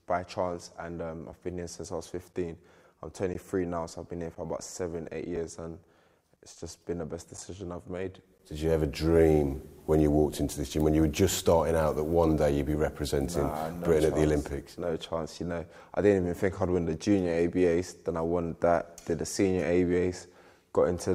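Gaps between stream segments: the timestamps of consecutive one-second segments leave small holes that the player fills with silence. Hard-edged dropouts of 4.5 to 14.7 ms cut the sound at 1.32, 2.33, 3.34, 4.35, 5.36, 7.37 and 8.38 s, though no audio is lost.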